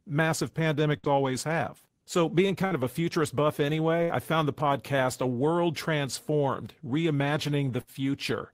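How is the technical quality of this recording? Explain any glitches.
The recording has four short dropouts, all bursts of packet loss, at 0.97 to 1.07 s just before "always have", 2.66 to 2.74 s just before "of a futurist buff", 4.03 to 4.12 s between "of a futurist buff" and "I found the podcast", and 7.81 to 7.90 s. Each time, a short run of packets never arrived in time, so the receiver stretched the last sound for roughly 50 to 65 ms while fading it down. The speech then picks up again about 60 ms further on, so a small piece of speech is skipped.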